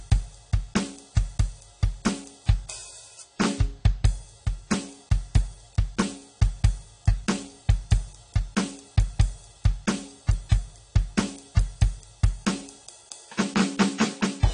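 Throughout, likely AAC compression at a bitrate near 32 kbps removes everything above 10.1 kHz, leaving the music dull, smeared and audibly warbling.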